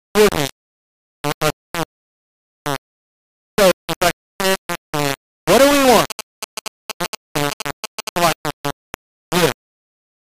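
From start to finish the speech is coated in a coarse, grainy distortion that moves with the voice and is nearly as loud as it, with quiet passages breaking up or sputtering. This is likely low bit depth without dither: samples rounded to only a few levels, consistent with about 3 bits.

From 6.10 s to 8.33 s a galloping dit-dit-dit of short buzzes at about 217 Hz cuts in, almost as loud as the speech. These are GSM signalling bursts: a nearby 2G phone's intermittent radio transmissions being rectified by the audio circuitry.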